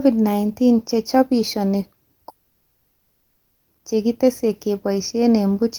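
From 2.29 to 3.70 s, a long network dropout, likely a stretch where no audio data reached the receiver, removes 1.38 s of speech. The receiver fills the whole gap by extending the last sound into a fading buzz or hiss, then resumes with that section lost.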